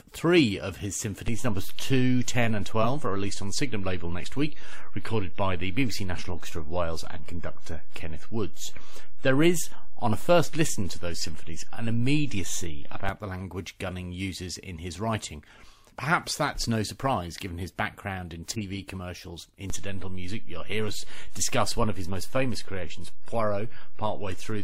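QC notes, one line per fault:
1.28 to 13.09 s, DC step: a low thump after "three of his" as the zero line jumps, holding offset until another thump before "the language".
2.82 s, corrupt frame decoded: a loud glitch peaking near -10 dBFS for about two frames, where damaged bits put energy at wrong frequencies.
18.53 to 18.62 s, corrupt frame decoded: a softer glitch near -25 dBFS after "given his background in", about two garbled frames misdecoded into stray spectral energy.
19.70 s to the end, DC step: a low thump as the waveform's baseline shifts suddenly, and the offset stays until the clip ends.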